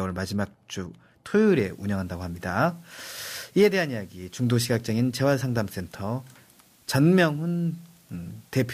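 Speech, with low bit depth with dither from 1.47 s to the end. Only about 9 bits remain, and dither turns the rounding error into steady hiss, roughly 35 dB below the speech.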